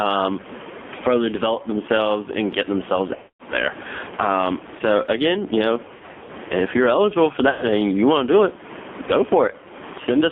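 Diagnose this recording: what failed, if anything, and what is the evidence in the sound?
Gain pumping at the capture stage: the level is pulled down on each loud sound, with a swing of around 15 dB. Loud and quiet syllables sit unnaturally close in level. The likely cause is input gain set far too high, with a fast limiter or compressor clamping each loud sound. This is not noise suppression or comfort noise, because the background is the same room noise, not gated or replaced.

AMR narrowband mobile codec on the call path: nothing is heard below about 200 Hz or above 3.5 kHz, and the voice is buzzy and synthetic. The room noise turns into a swirling warble, which points to a low AMR-NB mode around 5.9 kbps with heavy codec damage. A plain telephone band-limit would muffle the sound but would not add this buzz or make the background warble.

Lost AMR speech frames on the radio link, at three places. 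The first is 3.16 to 3.43 s, after "themselves and get themselves", about 240 ms of concealed audio. The second is scattered between 5.88 and 6.32 s, after "so again you know" and before "if you're eligible for", with runs up to 80 ms. The third is 7.50 to 7.63 s, after "if you're eligible for" and before "and you want to". The sound smears and fades rather than cutting out hard, which tells decoder concealment apart from a plain packet dropout.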